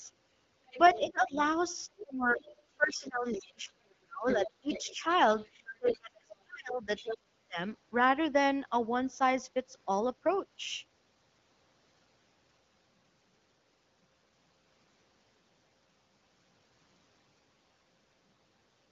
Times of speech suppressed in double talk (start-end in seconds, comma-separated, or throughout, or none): 0.94-5.05, 5.79-7.59